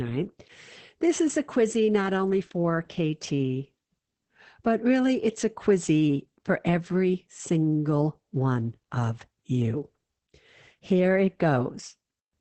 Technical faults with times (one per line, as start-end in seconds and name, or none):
0.00-12.40 Opus voice compression